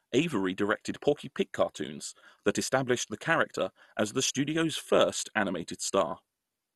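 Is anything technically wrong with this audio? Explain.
Yes. Throughout the speech, the sound is dull, with nothing above about 12.1 kHz, and carries a plainly audible gurgling, granular roughness. This is likely MP2 compression at a starved rate, consistent with about 64 kbps. Too few bits force the 32 sub-bands to be coarsely quantised, and upper bands switch off. Unlike a simple low-pass filter, the remaining bands flicker and grain.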